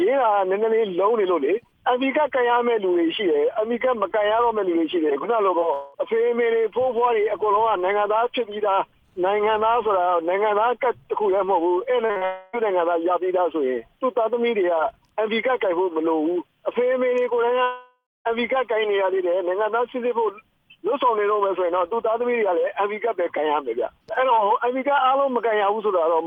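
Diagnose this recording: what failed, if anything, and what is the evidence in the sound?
The network path failed, with packets arriving late or not at all. A short concealed packet loss is heard at 5.59 to 5.63 s, a brief smear where about 20 ms was missing. A denser run follows from 12.06 to 12.23 s: three back-to-back losses of about 40 ms each. The decoder's concealment extends the preceding sound across each hole, then blends back into real audio. The result is smear and wobble rather than gaps.

Three longer breaks follow, at 5.73 to 5.96 s, 12.25 to 12.55 s, and 17.63 to 18.27 s. In the first two, the last sound is stretched into a fading buzz or hiss for about 0.2 s and about 0.28 s. The real audio then resumes further along. In the third, the fill runs out and about a quarter second of silence is left before the audio returns, with about 0.62 s lost. The likely cause is a long network dropout. 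The decoder can synthesise only briefly before giving up.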